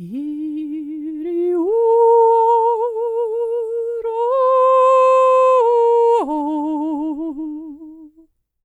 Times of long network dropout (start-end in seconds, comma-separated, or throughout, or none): none